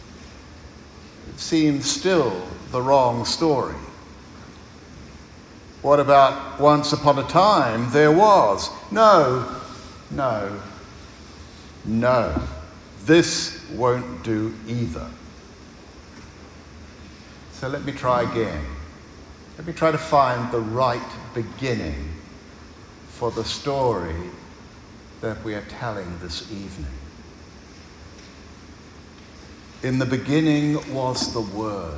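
A resampler restarted on every block affects the audio from 23.8 s to the end: a 100 Hz buzz rides on the signal, pointing to 10 ms blocks each converted separately, consistent with 24 kHz to 16 kHz. Every block edge lacks its true neighbouring samples, leaving a small error at each boundary.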